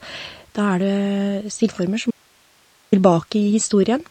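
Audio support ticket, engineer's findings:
Watery, swirly speech throughout, with smeared consonants and nothing above about 8.3 kHz. Likely MP3 compression at a starved bitrate, something near 34 kbps: the encoder drops the treble and lets weak frequency lines flicker in and out between frames.

Audio dropout to a faint residue, 2.11 to 2.92 s. The speech cuts abruptly for about 815 ms, leaving only hiss around 35 dB down. Likely the source feed was lost while the downstream path stayed live, so only its noise floor came through.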